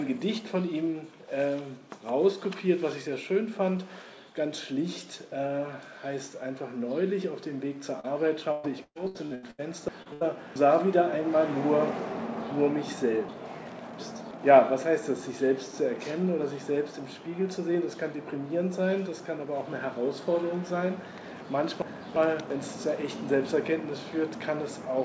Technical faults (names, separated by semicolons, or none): short concealed packet loss; repeated packet loss (robotic sound); chunks out of order; burst of packet loss